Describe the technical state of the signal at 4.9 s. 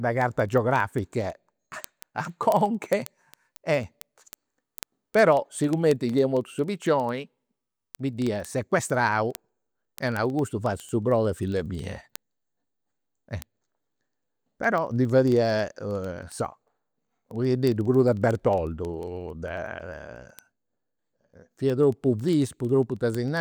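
At 4.9 s the speech carries word clock ticks, present from 0.12 s to 23.37 s. The receiving clock is not locked to the sender's and drifts by roughly 500 ppm, so a single sample slips about every 0.05 s, giving a steady train of sharp clicks of uneven strength.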